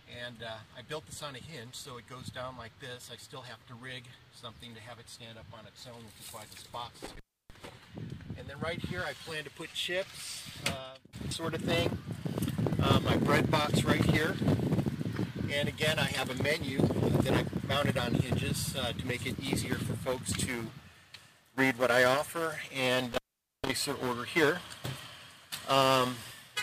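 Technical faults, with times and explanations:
7.05–7.65 s and 23.12–23.69 s, intermittent contact: a loose connection opens briefly. The sound drops out for about 0.30 s, then 0.46 s, with crackle at each edge and faint hiss between.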